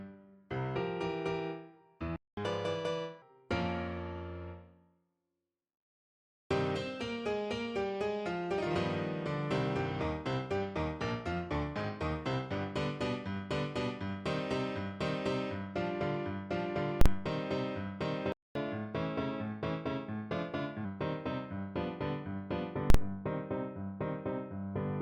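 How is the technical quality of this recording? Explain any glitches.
The recording has clear technical problems: two playback stalls, each followed by a catch-up at higher speed, and two bursts of invalid numbers at full scale.

Playback stalls at 2.16 s and 18.32 s: the sound stops mid-flow, going silent for about 0.21 s and then about 0.23 s, before resuming. The likely cause is the player running dry of data or its thread being blocked. On a waveform each stall is a flat line at zero; on a spectrogram it is a clean vertical gap with no energy at any frequency.

Catch-up at higher speed follows each stall, from 2.37 to 3.22 s and from 18.55 to 20.85 s. To win back lost time, the player resamples its backlog faster. The first stretch runs at 1.25 times speed, raising pitch roughly four semitones. The second runs at 1.1 times, about one and a half semitones higher. On a spectrogram, harmonics shift upward and events crowd closer together, then drop back to normal spacing and pitch.

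Invalid numbers at full scale hit at 17.01 to 17.06 s and 22.90 to 22.94 s. A calculation produced infinite or invalid values, clamped to the maximum. The output is pinned at one extreme value, far beyond the audio's peaks, for about 43 ms each time, which fits a 2048-sample processing block. Each block is so short that it is heard as a single loud bang. The waveform shows a solid rectangle sitting flat far beyond the audio's peaks, and the spectrogram shows bright broadband vertical lines at its edges.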